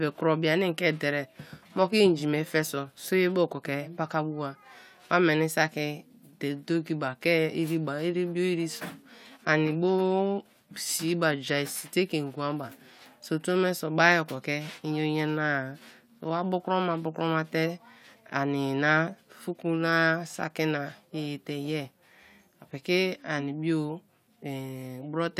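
No technical faults can be heard anywhere in the speech recording.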